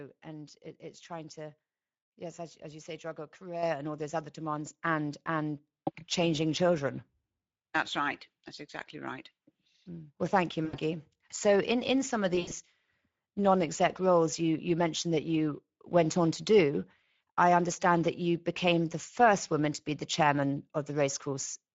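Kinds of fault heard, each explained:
Speex codec: Low-bitrate CELP coding starves the excitation of bits, so the speech throughout sounds plainly hoarse and noisy, which fits a setting around 16.8 kbps. On a spectrogram the harmonics look smeared, with grainy noise filling the gaps between them.
Microphone volume stepped up: The input gain jumps by about 7 dB in a single step at 3.63 s, between "as you say juggle" and "and all those other". Voice and background rise together. On the waveform the envelope steps up abruptly and stays at the higher level.
VoIP packet loss concealed by the speech codec: Speex fills the gaps by extrapolating its last pitch and filter at falling gain. After "thank you", 10.65–10.76 s bridges an 80 ms loss. After "in in some of", 12.35–12.53 s covers 120 ms lost in scattered bursts over 160 ms. A spectrogram shows flat, stretched harmonics fading into coloured noise.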